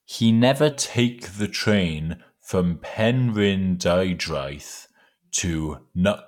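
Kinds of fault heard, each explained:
Wrong sample rate: from 0.71 s the speech runs slow and low, about 0.92 times speed and 1.5 semitones down, together, which fits 48 kHz audio played at 44.1 kHz.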